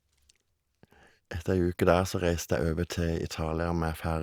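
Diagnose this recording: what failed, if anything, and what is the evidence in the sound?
No fault is audible here.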